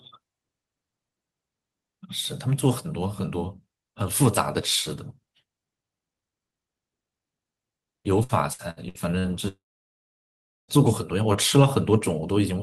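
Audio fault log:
8.23–9.27 s, repeated packet loss (robotic sound): five short holes open in the speech over about a second, the longest 63 ms, adding up to about 300 ms of lost audio. Each hole is bridged by stretching the sound just before it, so about 28% of this span is synthetic fill. That gives a choppy, robotic texture. Unlike a single long dropout, real speech keeps returning between the holes, so the stretch breaks up rather than going quiet.
9.48–10.71 s, long network dropout: about 1.2 s of audio is missing in one continuous block, likely from the network stream stalling entirely. The last sound is carried on briefly as a fading buzz or hiss, then about 1.09 s of silence follows before speech resumes further on, with the lost section skipped. Unlike repeated packet loss, nothing real breaks through in the middle. It is one unbroken gap that decays to silence rather than a run of choppy, robotic fragments.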